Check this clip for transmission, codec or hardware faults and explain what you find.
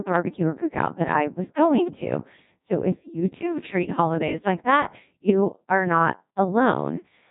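There's one fault, and it runs through the whole recording: the speech has gone through a Codec 2 vocoder. This low-rate digital-radio codec doesn't carry the waveform at all. It sends only pitch, voicing, energy and a rough spectral envelope, and the decoder rebuilds the voice from sine waves. The result here is heavily damaged, robotic and buzzy, with nothing above 3.8 kHz. The synthetic quality fits the 1.2 kbit/s mode.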